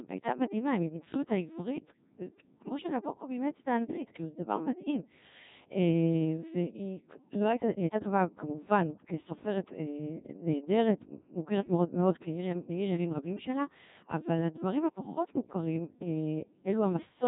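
Speech heard entirely through the Codec 2 vocoder, heavily damaged at a rate that fits about 1.6 kbit/s. The decoder rebuilds the voice from sine waves, leaving it robotic and buzzy. A spectrogram shows blurred harmonic stripes and nothing above 3.8 kHz.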